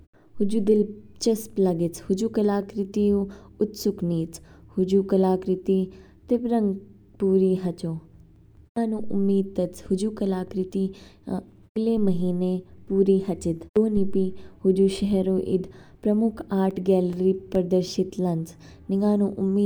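A disc blemish defeats error correction once per revolution, leaving CD scratch ticks: six brief clicks, the longest about 4 to 5 milliseconds, from 7.72 to 8.78 s and again from 16.71 to 17.77 s.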